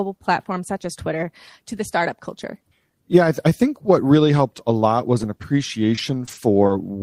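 From 5.07 to 6.71 s the speech shows scattered short gaps: about four brief packet losses, none much over 20 ms, each patched by extending the preceding sound. Roughly 80 ms went missing in total, heard as small ticks, smears and hiccups.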